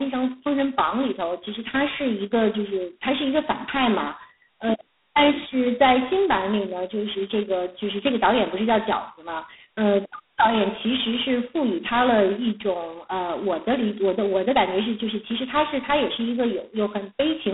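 Speech, carried from start to finish through G.726 ADPCM coding at its harshest setting. A rasping, gritty hiss rides on the speech and swells and fades with its level, which fits 16 kbit/s. That tracking tells it apart from a steady background noise floor or clean G.711 telephone audio. The band runs roughly 200 Hz to 3.6 kHz, with nothing above 3.8 kHz.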